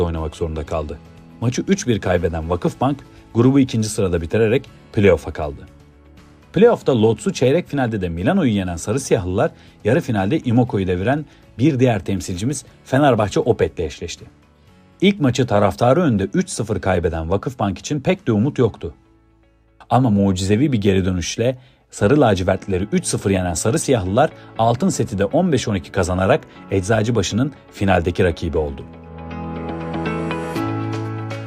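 Nothing here calls for comment, since no technical faults turn up anywhere in the clip.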